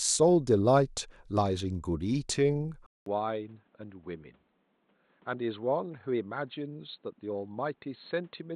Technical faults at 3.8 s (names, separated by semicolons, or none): input switched to a poorer device